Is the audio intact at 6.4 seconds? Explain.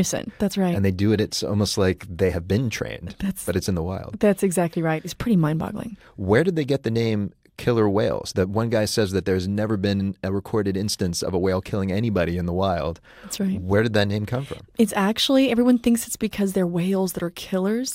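Yes, the audio at 6.4 seconds is intact, with no fault audible at that moment.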